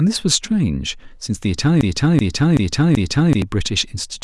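The playback or stream likely stalled at 1.81 s and kept resending the last fragment it held: a broken-record loop. A 0.38 s piece of speech repeats exactly four times, back to back, until 3.42 s, and the speech that belonged there is lost.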